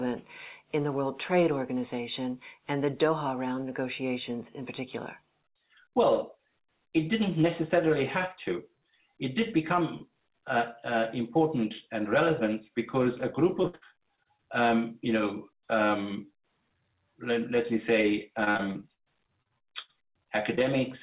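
Repeated packet loss (robotic sound) occurs from 13.62 to 14.40 s and again from 18.44 to 20.62 s. Lost packets, with gaps up to 60–67 ms, are patched by extending the last sound, so the audio turns choppy. On a spectrogram, these patches appear as smeared, repeated slices that stop at 4 kHz, the ceiling of the call path.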